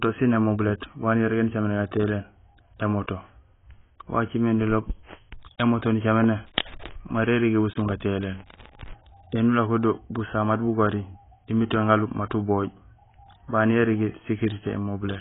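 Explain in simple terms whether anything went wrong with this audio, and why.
Throughout, the speech sounds dull and smeared, with nothing above 3.8 kHz. The likely cause is heavy AAC compression, which throws away detail to save space.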